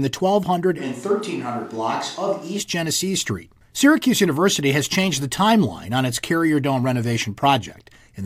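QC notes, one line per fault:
0.81–2.59 s, switch to a distant microphone: the speech abruptly turns roomy and hollow, thinner in the bass and about 5 dB quieter, with room noise rising to roughly 30 dB below it, likely a farther microphone standing in; unlike added reverb, the jump in and back is instant.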